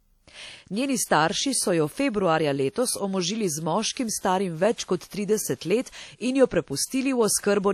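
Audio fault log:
throughout: likely WMA compression, plainly audible ringing, washy smear and breathing hiss consistent with about 48 kbps; spectrogram shows blurred time detail and nothing above 19.6 kHz.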